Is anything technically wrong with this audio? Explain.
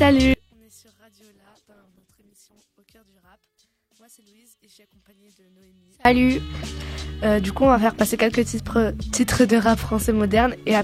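Yes, there are two faults.

From 0.34 to 6.05 s, the level collapses by about 34 dB, which points to a likely one channel inverted fault. With one side's polarity flipped, everything common to both channels cancels when they are summed to mono, so centred material and bass all but disappear. What survives is only the difference between the channels, heard as a faint residue until the level returns at 6.05 s.

From 1.35 to 2.85 s, a call bitrate drop occurs. The bandwidth estimate fell and the encoder was pushed from 96 kbps down to 14 kbps, staying at that floor for about 1.44 s. At such a low rate the codec quantises coarsely and trims away the upper frequencies, so during this stretch the already faint sound turns rough, watery and muffled before the bitrate recovers.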